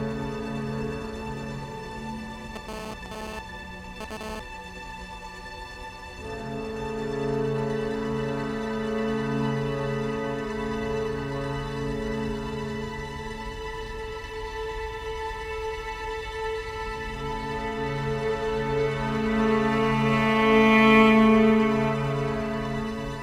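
GSM phone buzz runs from 2.56 to 4.40 s, a hard, raspy buzz sitting about 9 dB below the sound and bearing no relation to it. A nearby 2G handset was sending radio bursts at about 217 per second, and something in the audio chain rectified those pulses into a 217 Hz tone crowded with harmonics. Because the phone was moving data rather than holding a call, the interference arrives as a burst that starts and stops instead of droning throughout.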